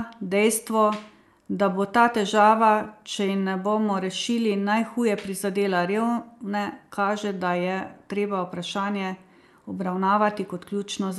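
The speech has no technical faults: its top end stops at about 12 kHz, consistent with an Opus call path working as intended.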